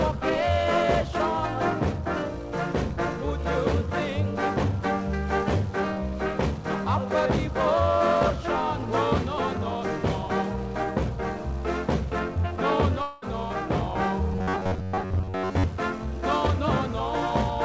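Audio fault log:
13.02–13.24 s, long network dropout: A likely break in packet delivery left about 200 ms of audio missing. The receiver covered the whole gap by stretching the last sound into a fading buzz, with no fully silent stretch, before the audio resumed with that portion lost.
14.33–15.64 s, robotic sound from repeated short buffers: New audio likely arrived too seldom, so the receiver looped one short block for most of this span while the real material was skipped. The 93.8 Hz buzz fits a block of about 10.7 ms and gives a rigid, metallic tone.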